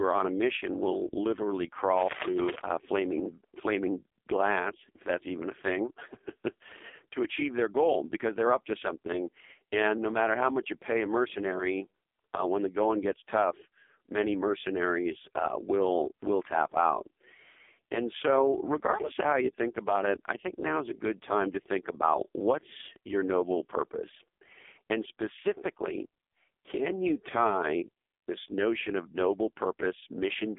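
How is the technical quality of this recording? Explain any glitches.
The recording is limited by mobile codec damage for its full length. Throughout, the AMR narrowband mobile codec is audible: nothing above 3.6 kHz, a 300 Hz to 3.5 kHz telephone band, and heavy buzzy, synthetic speech. The 8 kHz vocal tract model gets too few pulse bits, which fits its lowest 4.75 kbps mode.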